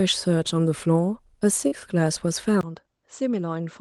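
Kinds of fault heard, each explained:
Short concealed packet loss: about 40 ms of audio arrived too late near 1.67 s, and the decoder bridged the gap by extending the preceding sound, leaving a brief smear.
Input switched to a poorer device: at 2.61 s a 20 ms silence, then duller sound with nothing above 7.8 kHz, about 10 dB quieter, likely a change of microphone.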